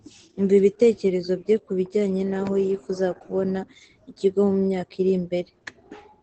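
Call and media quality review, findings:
Opus voice compression, whole clip, speech. Plainly audible codec damage: muffled, hoarse and slightly robotic. Nothing above about 8.6 kHz. Sound points to SILK in wideband at a low rate, about 12 kbps. Coarse excitation coding roughens the voice.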